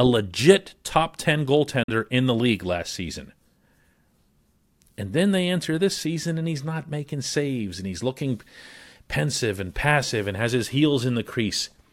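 At 1.83 s the speech cuts to silence, returning at 1.90 s on "in the league last". This is a Bluetooth dropout, likely from packets arriving too late and being discarded. About 46 ms of sound is skipped, which fits two lost frames, and speech resumes as if it had played on.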